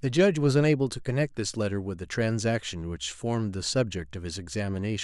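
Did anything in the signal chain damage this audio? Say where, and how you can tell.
No, I can't hear any damage at any stage of the chain in this speech recording.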